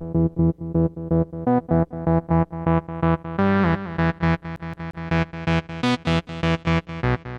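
A CD stuck on one turn runs from 4.56 to 5.08 s: a scratch throws the laser back, so a 175 ms slice repeats three times, each jump marked by a brief mute.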